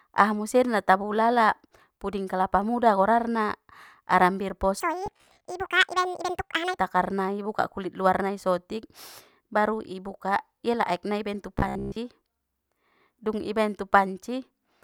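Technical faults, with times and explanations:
4.80–6.78 s, section at the wrong speed: this stretch is likely clocked at the wrong rate, running about 1.82 times too fast, so speech rises roughly ten semitones and turns hurried and chipmunk-like before returning to normal at "takarnai i".
5.06–5.45 s and 11.59–11.96 s, robotic sound from repeated short buffers: audio arrives too late and the likely cause is a playback path repeating a 15 ms buffer, forcing a rigid 66.7 Hz metallic buzz. About half the first span is repeats, and most of the second, just after "nai ibaen tu".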